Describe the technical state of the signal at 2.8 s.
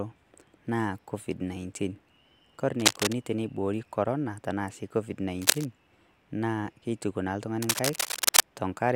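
Cable scratch noise runs from 2.80 to 3.13 s: dense, uneven bursts of scratchy rustling sit over the speech, about 5 dB above it. The likely cause is a worn cable or connector being moved, its contact resistance fluctuating rapidly.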